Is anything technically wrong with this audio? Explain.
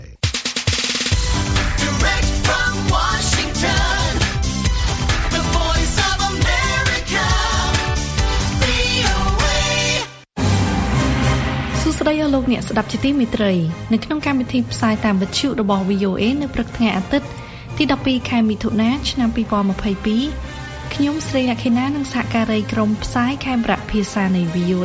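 No, nothing technically wrong is audible anywhere in this audio.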